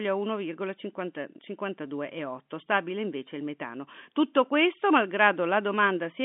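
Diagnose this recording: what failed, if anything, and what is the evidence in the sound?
Nothing failed in this recording; the speech comes through a telephone line band of about 200 Hz to 3.5 kHz, consistent with G.711 telephone coding, with no fault to be heard.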